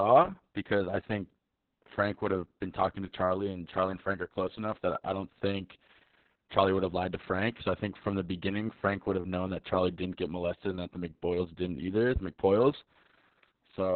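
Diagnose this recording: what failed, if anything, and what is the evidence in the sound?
Codec stage: heavy Opus voice compression throughout, likely SILK narrowband at about 6 kbps. The spectrogram shows a hard ceiling near 4.3 kHz. The speech sounds muffled, hoarse and robotic from coarse excitation coding.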